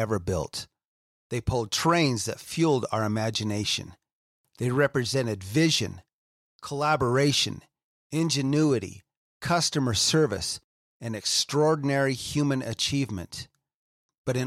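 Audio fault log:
No technical faults can be heard anywhere in this speech recording, and the signal holds steady with nothing that would point to a problem in how it was captured or carried.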